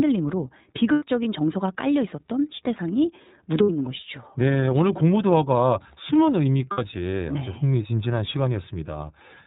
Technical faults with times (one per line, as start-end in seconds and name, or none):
0.00-9.46 iLBC codec
0.93-1.03 lost iLBC frames
3.63-3.70 lost iLBC frames
6.71-6.79 lost iLBC frames